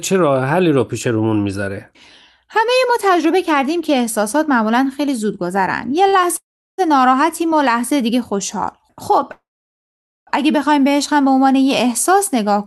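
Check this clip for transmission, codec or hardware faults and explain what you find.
Three network-timing faults are audible in this speech, all on a call path whose high end stops near 12 kHz.

Short stall from a late packet, 6.07 to 6.16 s: one packet arrived late and the jitter buffer ran dry. The receiver stretched the last sound for 54 ms, then resumed from the same point. A sound is held slightly too long with a faint buzz or dip, and nothing is lost.

Call audio freeze, 6.37 to 6.81 s and 9.32 to 10.30 s: the likely cause is packets held up in transit, emptying the jitter buffer. The receiver extends the last sound as a fading buzz or hiss, then goes silent for 360 ms in the first freeze and 840 ms in the second. Speech then resumes where it stopped, with 412 ms and 952 ms of gap inserted and nothing missing.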